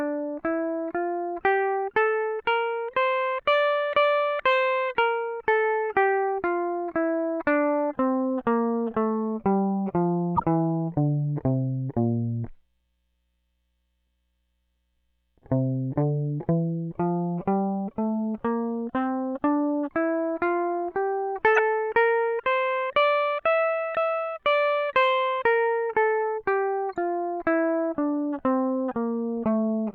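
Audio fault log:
10.36–10.43 s, 21.56–21.59 s, 26.93 s: corrupt frame decoded. Damaged frames were decoded anyway, so misread gains put energy at wrong frequencies: brief chirpy bursts, the first two loud near -10 dBFS, the last faint. A dropout removes sound; here sound is added.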